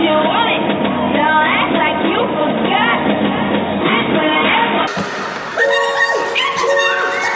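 From 4.87 s to the end, the audio has a wrong sample rate fault: it runs twice as fast and a full octave (12 semitones) higher, which fits material captured at 8 kHz being played back at 16 kHz with no conversion. Unlike a pitch shifter or a time-stretch, both speed and pitch move by the same factor of two, and there is no warbling or smearing, just a clean, chipmunk-like doubling.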